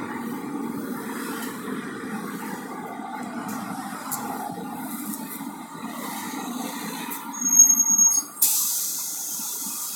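Nothing here to flag: these sounds come across without any technical faults.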